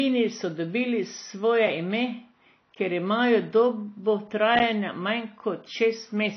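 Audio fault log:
Throughout: AAC compression, likely the cause of the dull, smeared quality of this speech. Nothing is heard above 6 kHz, so sibilants lose their edge. The bands left below are coarsely quantised, which puts a watery, warbling texture on vowels and a fizzy grain on the consonants. That damage is plainly audible. It differs from a simple low-pass filter because the smearing and swirl come along with the cut-off, and a filter would leave a clean tone below its corner.
4.59 s: block of digital silence lasting 10.67 ms, a hard drop to silence and back with no fade either way. The instant jumps at each edge fuse into a tick or dip, not an audible hole, because the gap is so short. Its length fits a 512-sample buffer that was not filled in time. It differs from a codec dropout or packet-loss concealment, which smooths or fills the gap. Here the signal simply stops dead.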